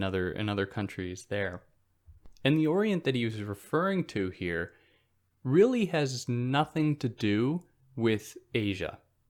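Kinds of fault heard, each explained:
Bit error spike: a single sharp tick at 3.30 s, brief and bright, spread evenly across the spectrum and unrelated to the speech around it, peaking at about -42 dBFS. It lasts one sample, so it reads as a dry click rather than a pop or crackle. The cause is one flipped bit in memory or on a digital link, which throws that sample's value off by a power of two before the next sample returns to normal.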